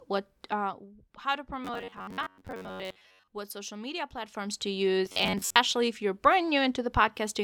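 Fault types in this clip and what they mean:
Zipper noise: From 0.44 to 0.95 s, just before "how to", the level falls about 10 dB in 1 dB steps, roughly forty per second, with no smoothing between them. Each jump clicks, so a fine ticking rides on the speech. It happens again from 4.18 to 4.64 s, after "what social media", as the level climbs back about 10 dB.
Robotic sound from repeated short buffers: From 1.65 to 3.28 s and from 5.06 to 5.56 s, just before "if you're", the speech becomes a rigid metallic buzz at 93.8 Hz. This is likely caused by late-arriving audio, with a segment of about 10.7 ms replayed over and over while most of the real signal is skipped.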